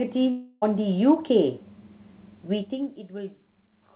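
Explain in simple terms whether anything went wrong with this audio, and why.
Two things went wrong in this speech recording.

From 0.30 to 0.64 s there is a long network dropout. For about a third of a second the sound turns into a fading buzzy hiss, and then the speech resumes with that piece simply gone. The likely cause is that no audio reached the receiver, so it stretched the last sound it had to cover the gap. A short glitch would be a brief blip. Here a whole stretch is missing and papered over.

From 2.52 to 2.92 s there is zipper noise. The volume drops quite a lot, but in many small jumps, about 40 per second, instead of gliding down. Each jump makes a tiny click, so a fast ticking rides on the speech while the level falls. A properly smooth fade changes volume just as much without any ticking. The clicks come from the steps, not from the sound itself.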